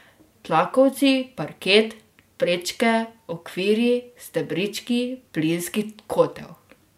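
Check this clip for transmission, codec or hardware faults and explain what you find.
Nothing here points to a transmission, codec or hardware problem; the speech comes through without any such fault.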